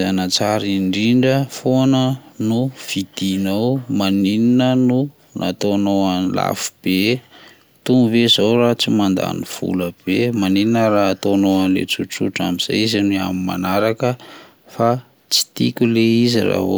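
No technical faults can be heard anywhere in the recording. The speech carries on without any interruption or disturbance from its first moment to its last.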